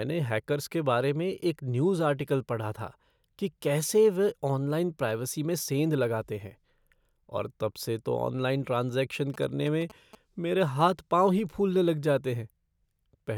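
From 9.34 to 10.15 s there are GSM signalling bursts: a nearby 2G phone's radio pulses get rectified into a galloping 217 Hz buzz, well under the speech.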